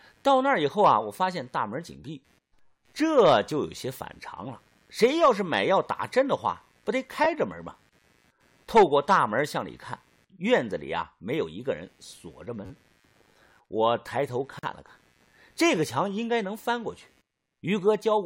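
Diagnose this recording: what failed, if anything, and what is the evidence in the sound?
Computer activity noise runs through all 18 seconds, a faint buzz pulsing at around 100 Hz, roughly 40 dB below the speech. It follows the machine's workload rather than the speech, rising and falling independently of it. That points to the analogue wiring. Current swings from the processor, graphics card or mouse disturb the ground the audio circuit shares with the computer, and the interface picks that movement up as noise.

Repeated buffer faults appear at 7.24 to 7.26 s, 12.66 to 12.70 s and 15.76 s, heard as brief stutters and clicks. The longest is at 12.66 s, where one segment plays four extra times. The repeated unit is about 10.7 ms long, which fits a 512-sample buffer. This failure happened at the driver or buffer stage. Fresh audio missed its deadline, so the device replayed the last block, with a hard join at each repeat.

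A gap at a join of encoded pieces opens at 14.59 to 14.63 s. It is a silence of about 44 ms cutting into continuous speech, with smeared edges, and the speech then resumes exactly where it stopped. The cause is the codec stage. Separately encoded segments were spliced without trimming, so the encoder's start-up delay and its padding on the final frame remained as dead air between the pieces.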